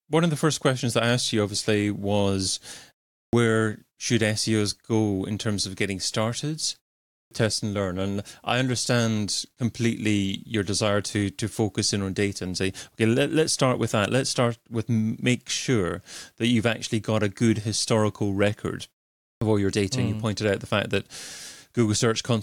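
Speech here, and it's got a clipped start after a pause in three spots: 3.20 to 3.33 s, 7.19 to 7.31 s, and 19.30 to 19.42 s. Each follows a short gap of about 0.4 to 0.5 s, and each time roughly 115 to 130 ms of the onset goes missing, so the talker jumps in abruptly without the opening sounds. The output device is dozing through the silence and takes that long to wake back up.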